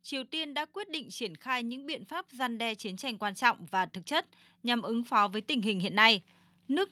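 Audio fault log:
0.09–4.02 s, automatic gain rising: the gain control judged the input too quiet and slowly raised its gain by about 7 dB, so voice and background noise swell together.
4.62–6.91 s, automatic gain rising: the gain control again pushed its level up over about two seconds, lifting the speech and the room noise beneath it as one.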